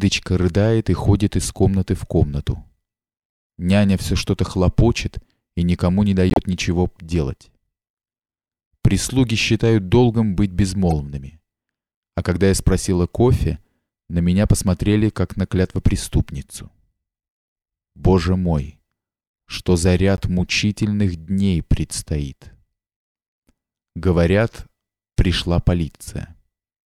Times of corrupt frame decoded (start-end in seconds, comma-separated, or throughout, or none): 6.30-6.38, 10.90-10.92, 20.17-20.20